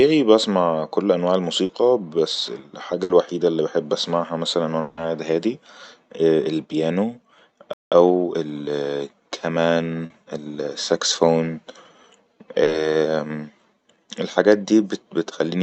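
At 1.65 s, just after "بأسمع كل انواع", a short concealed packet loss leaves a brief smear: about 40 ms of lost audio was filled by extending the preceding sound and cross-fading back. The same thing recurs at 10.06 s and 12.64 s.

At 3.03 s, just before "اللي بحب بأسمعها مثلن", a burst of packet loss replaces 60 ms of audio with a continued, fading version of the previous sound, then resumes later on.

Right after "اللي بحب بأسمعها مثلن", from 4.81 to 4.99 s, a 160 ms stretch is replaced by a prolonged, decaying continuation of the last sound with no silence, likely a long network dropout.

From 7.73 to 7.92 s the output goes silent for about 0.18 s in mid-flow, a gap likely caused by a playback stall.

Time-compressed catch-up follows from 7.92 to 8.64 s. The player trims its backlog by splicing out small pieces, so the audio runs at 1.25 times normal speed without a pitch change.

Throughout, the Opus call path at 48 kbps limits the audio to 8 kHz.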